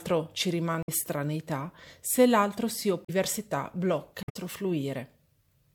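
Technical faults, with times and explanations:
0.83–0.89 s, 3.05–3.10 s and 4.23–4.37 s: damaged data in a compressed stream. Three short glitches, roughly 70 ms, 50 ms and 140 ms long. At each spot the compressed data was corrupted, so the decoder couldn't make sense of those frames. It decoded junk or dropped them, lost its place and had to hunt for the next valid frame header before it could resume normal playback.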